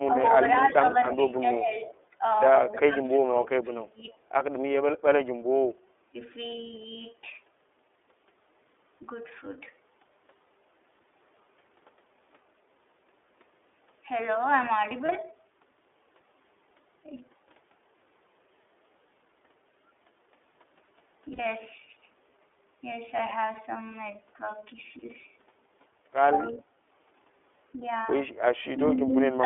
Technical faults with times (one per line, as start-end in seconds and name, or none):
0.00-29.45 iLBC codec
0.97-1.15 echo leak
1.89-2.04 echo leak
2.72-3.19 echo leak
2.84-4.06 speech suppressed in double talk
4.10-4.15 echo leak
15.06-15.10 lost iLBC frames
21.32-21.40 lost iLBC frames
26.51-26.66 speech suppressed in double talk